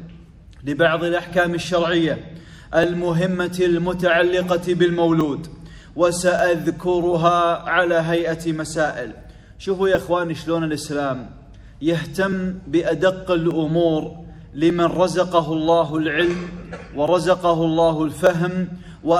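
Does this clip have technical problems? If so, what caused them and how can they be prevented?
Yes. Regular clicks every 1.19 s from 0.46 to 18.27 s are likely clock drift buffer slips. Two unsynchronised clocks drift until a small block of samples is dropped or repeated. The strict, even spacing distinguishes them from random dropouts. Locking both devices to one shared word clock prevents this.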